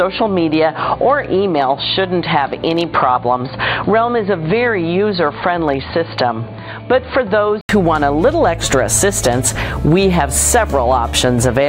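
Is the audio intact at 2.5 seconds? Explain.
No. From the start to 7.69 s the sound is dull and boxy with nothing above 4.6 kHz and a noise floor roughly 35 dB down, likely an input switched to a poorer device. It clears up after an 80 ms gap, at about the same level.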